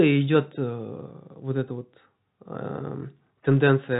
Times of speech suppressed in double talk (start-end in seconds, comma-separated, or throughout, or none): none